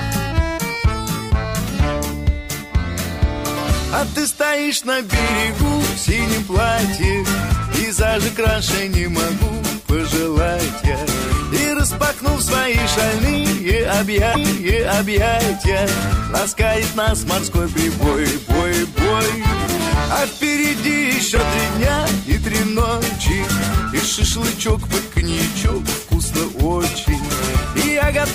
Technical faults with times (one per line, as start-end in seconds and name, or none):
21.35-21.38 corrupt frame decoded